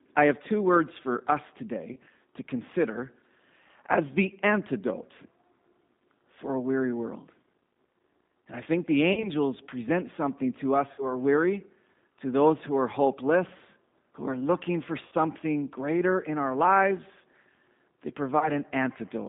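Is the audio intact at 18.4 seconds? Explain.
No. From 18.39 to 18.50 s, VoIP packet loss concealed by the speech codec: about 20 ms of audio went missing, which fits a single lost packet. The decoder extended its last pitch and filter, so the sound smears into a brief buzzy tone or coloured noise that fades and stays weak for a moment after recovery. A plain dropout would leave a silent gap. Underneath, the G.729 codec holds the sound to roughly 150 Hz–3.7 kHz throughout, with clearly audible rough, synthetic colouring.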